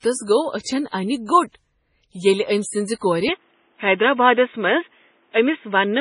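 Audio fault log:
Throughout: MP3 compression, with heavy codec damage. The sound is watery and swirly, and attacks smear. Nothing remains above 10.6 kHz. This is likely MP3 encoding starved of bits. The encoder drops weak frequency lines, so they flicker on and off from frame to frame, and it cuts the treble at a fixed point. The depth of damage fits a low bitrate of about 24 kbps.
3.29 to 6.01 s: input switched to a poorer device. From 3.29 s to the end, the sound turns dull and narrow, with nothing above 3.8 kHz. There is no silence at the change. The level stays about the same. A new background noise sits roughly 45 dB below the signal. The cause is likely a switch to another microphone or a headset's call profile, which passes a narrower band and brings its own tone and noise.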